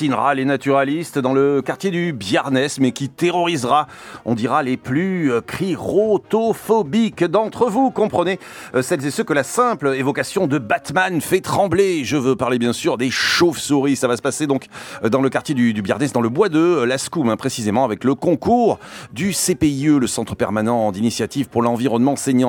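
Flipped bits in compressed data were decoded as a corrupt frame, misplacing energy across a couple of frames: a faint blip at 5.66–5.71 s and a much louder burst at 13.12–13.16 s.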